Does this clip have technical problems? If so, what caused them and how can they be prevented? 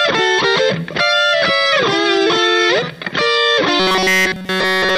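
Yes. From 3.80 s to the end at 4.97 s, new audio likely arrived too seldom, so a 5.3 ms buffer was replayed continuously while real sound was skipped. This robotic sound from repeated short buffers forces a rigid, metallic 188 Hz buzz onto the whole stretch. Larger buffers or more processing headroom keep the audio stream fed and prevent it.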